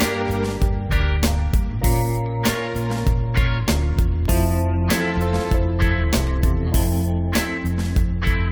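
From about 0.28 s to 8.26 s there's a small tick roughly every 2.0 s, about five in all: periodic USB or driver dropouts. Something stalls the audio path on a fixed schedule, and each time a sliver well under a millisecond is replaced with silence.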